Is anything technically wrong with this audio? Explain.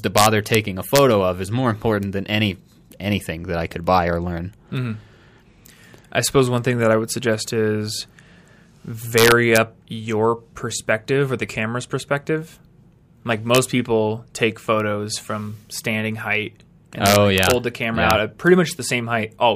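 Yes. The speech has integer overflow at 0.18–0.55 s, 0.96–0.98 s, 9.18–9.57 s (just before "your perspective or the"), 13.55–13.58 s (before "people take photos from"), 17.06–17.51 s (between "from standing height and" and "hold the camera yeah"), and 18.11 s. Loud peaks exceed the integer limit by only about 1–2 dB, but instead of being limited they wrap to the opposite extreme. Each wrapped peak produces a harsh crack that is far sharper than ordinary clipping.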